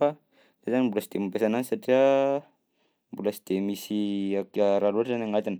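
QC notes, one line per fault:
4.06–5.59 s, Bluetooth SBC bit pool drop. The link congests and the encoder cuts its bit allocation, which fits a bit pool fall from 31 to 15, near 105 kbps. The upper sub-bands starve. Treble dulls and gritty quantisation noise rises through the end of the clip.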